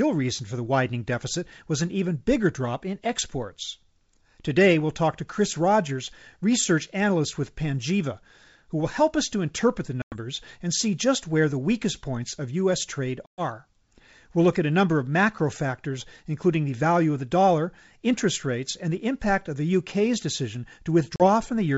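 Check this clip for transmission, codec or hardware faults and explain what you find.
The clip has one fault, packet loss on an ADPCM call, occurring three times: 10.02 to 10.15 s (between "us to interpret the" and "and see just where"), 13.26 to 13.43 s, and 21.16 to 21.22 s, losing about 100, 120 and 40 ms. Each hole is silence, and because packets are missing the decoder's predictor and step size drift from the sender's and the speech resumes with a click, wrong level or brief distortion. On a waveform it appears as flat gaps, and on a spectrogram as blank vertical bands. The G.722 wideband coding underneath still reaches up to about 7 kHz.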